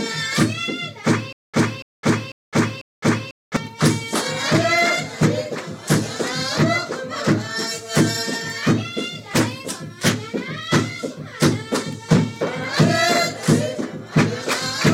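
From 1.33 to 3.56 s there's a stutter with silent gaps: a 285 ms burst of the same audio plays four times, each followed by about 211 ms of dead digital silence, so it ticks along at an even beat of roughly half a second. It sounds like a stuck, hiccuping loop. The likely cause is a stalled player or stream replaying its last fragment on each retry and then running dry, so whatever should have played there is simply gone.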